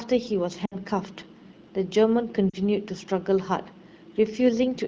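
Speech clip, coded with AMR wideband, showing lost AMR speech frames at 0.65–0.76 s and 2.50–2.57 s. Each gap is about 60 ms and 40 ms, which fits three and two 20 ms frames. The decoder stretches the last good frame with falling gain, so the sound drops to near silence within two frames before the voice returns weak or rough for a moment.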